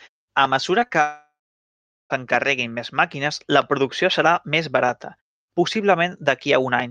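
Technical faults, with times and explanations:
0.79–0.96 s, repeated packet loss (robotic sound): several holes of up to 20 ms each are patched by repeating the last sound, giving brief choppy stutters.
1.02–2.12 s, long network dropout: about 1.1 s of audio is missing, likely from a network outage. A fading buzz or hiss gives way to about 0.77 s of silence, unlike the brief stutters before it.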